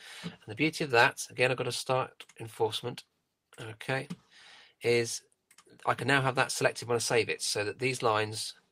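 Nothing in this audio stands out as a technical fault at any point, so there's nothing here to flag.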